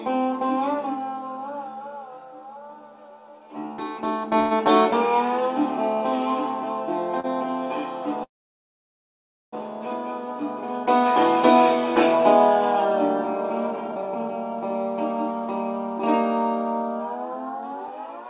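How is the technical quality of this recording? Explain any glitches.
The recording has several timing glitches from a network call. The audio also sounds narrowband, with nothing above 4 kHz, which fits a G.711 mu-law call path at 64 kbps.

Call audio freeze at 4.40 to 4.53 s and 8.24 to 9.54 s. The first fills about 108 ms with a fading tail. The second lasts 1.29 s, mostly silence. The likely cause is delayed packets emptying the jitter buffer. Nothing is lost. The audio resumes where it stopped.

Short stall from a late packet at 7.20 to 7.26 s. One packet arrived late. The receiver stretched the last sound by 34 ms, then continued. You hear a brief held sound with a faint buzz or dip.

Jitter buffer speed-up from 17.03 to 18.25 s. The buffer held more audio than its target. The receiver trimmed small pitch-period pieces, about 70 ms in total. Playback runs at 105% speed with unchanged pitch, so it sounds slightly hurried.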